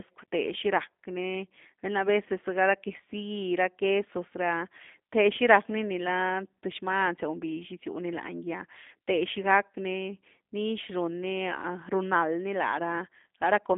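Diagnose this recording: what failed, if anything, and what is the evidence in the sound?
The fault sits at the codec stage: the whole speech recording has passed through G.729 coding. Throughout, the audio is confined to a telephone band of roughly 200 Hz to 3.6 kHz, with nothing above 3.7 kHz, and the voice has a plainly audible rough, synthetic texture. The codec reduces each 10 ms frame to a vocal-tract filter, a pitch predictor and a few pulses. The result is intelligible but brittle, which fits the 8 kbit/s G.729A variant.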